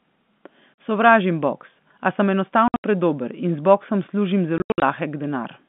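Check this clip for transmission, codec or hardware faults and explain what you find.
The speech breaks up three times with sudden dead gaps, the fault being packet loss filled with silence. At 0.75 s a brief hole cuts in. From 2.68 to 2.84 s, and again from 4.58 to 4.82 s, the audio stutters through clusters of dropouts, the longest about 80 ms, as the signal drops to silence. Packets of speech never arrived and the receiver played silence in their place. The gap lengths point to roughly 20 ms packets. The G.711 telephone band underneath stays narrow and clean.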